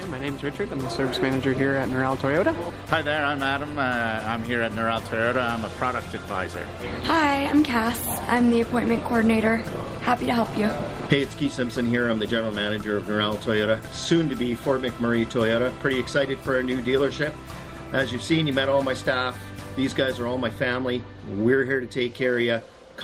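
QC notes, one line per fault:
Nothing to flag here, the whole thing sounds fine to my ear.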